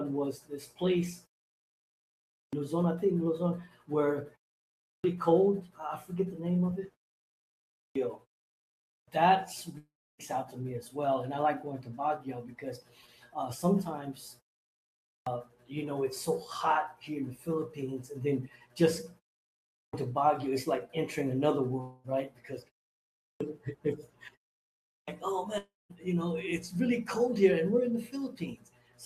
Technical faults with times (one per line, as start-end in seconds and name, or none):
2.14-2.53 clipped start after a pause
4.59-5.04 clipped start after a pause
7.52-7.95 clipped start after a pause
8.64-9.08 clipped start after a pause
9.77-10.21 long network dropout
14.83-15.27 clipped start after a pause
19.48-19.93 clipped start after a pause
21.81-22.06 long network dropout
22.99-23.40 clipped start after a pause
24.65-25.08 clipped start after a pause
25.58-25.92 long network dropout